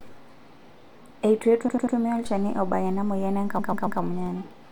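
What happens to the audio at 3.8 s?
Repeated frames run from 3.58 to 4.00 s. A 139.3 ms stretch of the speech, which fits a run of six compressed frames, is played three extra times, so the decoder repeats that same slice of sound back to back. It is heard as a stutter, and the clip is 418 ms longer than the original.

A DC step is also in force at this moment, spanning 2.26 to 4.26 s. The waveform's zero line shifts abruptly at 2.26 s, is still offset at 3.8 s, and ends at 4.26 s, as when an input carrying an offset is switched in. The step is heard as a low thump or click. The offset itself is inaudible, so the speech carries on unchanged beneath it.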